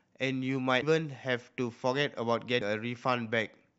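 At 0.82 s and again at 2.60 s, the speech breaks into a brief blip. Both are damaged data in a compressed stream. Corrupt bytes garble a frame. The decoder misreads it and loses sync, then recovers at the next frame header.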